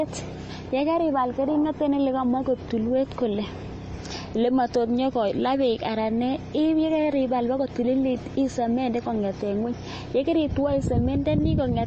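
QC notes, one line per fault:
throughout, MP3 compression: nothing above 8.3 kHz, and the speech sounds watery and swirly, with metallic s sounds. Likely a bit-starved MP3 encoder, which fits a bitrate around 32 kbps, cutting the treble and switching weak frequency lines on and off between frames.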